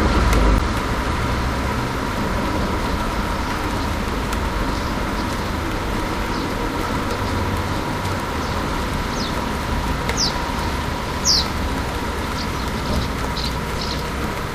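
A brief glitch cuts through the sound at 0.58 s, and a second, similarly short one appears at 13.35 s. Both are damaged data in a compressed stream: a small stretch of the encoded bytes was wrong or missing, so the decoder misread those frames, lost its place in the stream and had to hunt for the next valid frame header.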